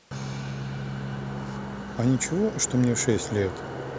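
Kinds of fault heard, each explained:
No technical faults are heard.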